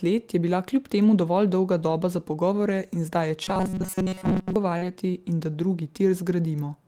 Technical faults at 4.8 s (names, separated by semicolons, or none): short concealed packet loss; lost packet rebuilt from error correction